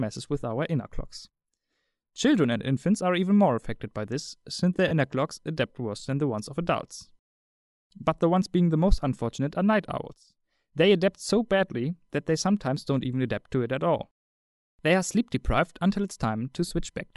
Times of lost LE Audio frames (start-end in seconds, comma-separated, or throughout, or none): 4.88-4.91, 16.68-16.71